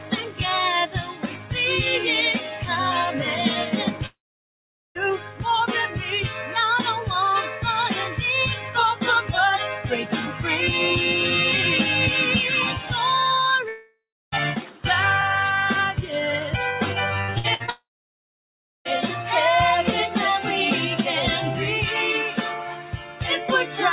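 A speech-tuned noise suppressor applied to music or sounds treats steady content as noise, so level pumps by about 5 dB; the waveform envelope visibly breathes as held energy sinks. Sound is cut by the noise suppressor at 0.0–1.52, 2.39–2.67, 3.92–6.55, 7.47–10.41, 14.59–14.84 and 22.51–23.79 s, dipping about 6 to 10 dB, with sustained tails shown darker on the spectrogram. At 4.06–4.97, 13.68–14.34 and 17.70–18.87 s the sound buzzes briefly, then goes silent, likely from a long network dropout; the waveform flattens into a near-empty block. Just before the last one, 17.22–17.70 s turns choppy and robotic from repeated packet loss: four short gaps patched with smeared, comb-like spectrogram slices.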